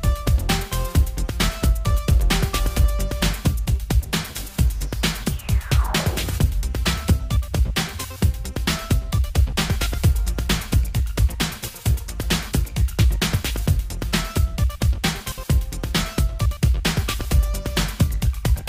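Listening through the recording, nothing stood out as a technical problem at any point.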